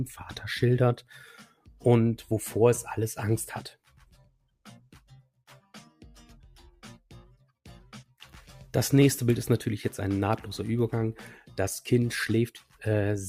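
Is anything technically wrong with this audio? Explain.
Yes. A noise suppressor made for speech has been left running on this material, and in three places it has cut into the sound itself.

Noise suppressor applied to music or sounds, throughout the clip: the processor treats sustained, steady content and decaying tails as background noise and applies gain reduction to them, while transients pass largely untouched. Because the reduction rises and falls as it keeps reclassifying the signal, the level swings by around 5 dB. Held material sinks and recovers, so the sound pumps and loses body.

Sound cut by the noise suppressor, at 1.4 to 1.71 s, 3.73 to 5.42 s and 12.57 to 12.81 s: in these spans the suppressor judged the sound to be noise and attenuated it far more heavily, by up to about 15 dB, 18 dB and 16 dB respectively. The middle span is the longest, with well over a second of content pushed down. 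Sustained and fading parts drop away or have their decay truncated, while sharper onsets still come through.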